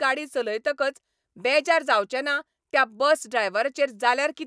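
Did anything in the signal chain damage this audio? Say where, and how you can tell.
No, none of the stages from capture through playback has left any audible damage on this speech.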